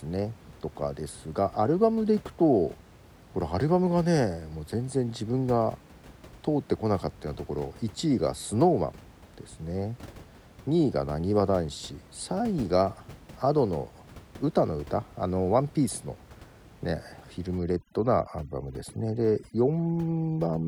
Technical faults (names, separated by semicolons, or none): overdone noise removal